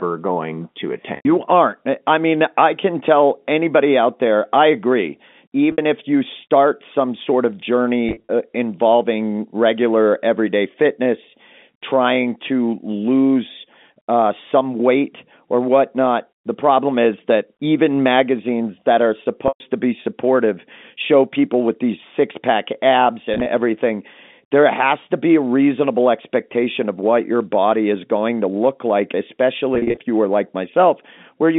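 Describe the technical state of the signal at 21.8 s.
At 21.8 s the speech is intact, with no fault at that moment, only the narrow, band-limited sound of ordinary G.711 telephone coding.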